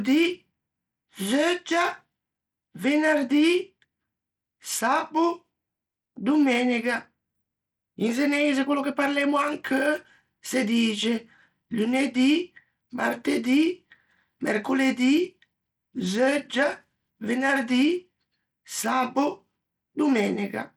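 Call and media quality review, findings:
Gritty, coarse-grained texture on speech throughout; treble flickering in and out, grainy aliasing riding on the speech. Likely Bluetooth SBC compression: starved bit pool, consistent with roughly 96 kbps, top sub-bands sporadically zeroed, remainder coarsely quantised. Nothing above 19.5 kHz.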